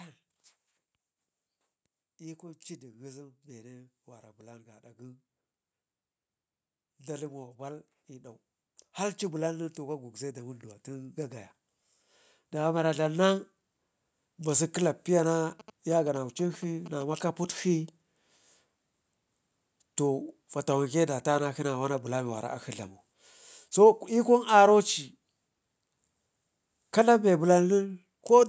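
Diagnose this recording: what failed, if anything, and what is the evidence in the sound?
Automatic gain rising in the call processing stage. From 2.18 to 5.27 s, then 6.99 to 15.37 s, speech and background swell together by about 5 dB, then about 12 dB.

GSM signalling bursts entering the analogue wiring. From 15.60 to 17.03 s, a galloping dit-dit-dit of short 217 Hz buzzes sits well below the speech. A nearby phone's radio bursts are being rectified.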